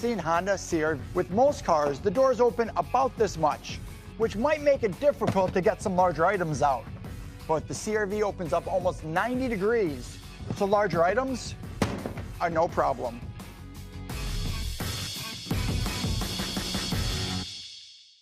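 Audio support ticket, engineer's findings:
Skip ahead at about 0.99 s: playback jumps forward with no fill, roughly 0.7 s of audio gone, the two sides joined almost directly. Audio dropped in transit or by the jitter buffer while newer audio was already queued, cutting delay by about the same amount.

Jitter buffer speed-up from 1.10 to 2.59 s: audio runs about 6% fast at unchanged pitch, sounding slightly hurried. The receiver trimmed short pitch-period pieces repeatedly, about a tenth of a second in total, to bring excess buffered delay down.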